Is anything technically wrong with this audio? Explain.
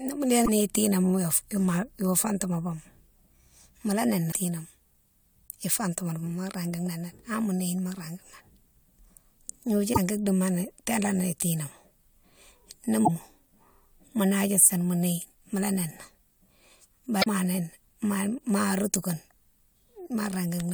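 Yes. Damaged data in a compressed stream causes brief glitches at 0.42–0.49, 4.29–4.35, 9.90–9.98, 13.02–13.09 and 17.20–17.27 s. Corrupted frames make the decoder misread data and lose sync until it finds the next valid header.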